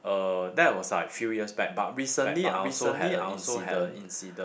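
From 2.20 s to the end, a doubled audio track appears: a second full-band copy of the speech trails the original by roughly 0.7 s, about 5 dB quieter. It has no decay or room colour and starts abruptly, likely a slower duplicate capture path mixed in.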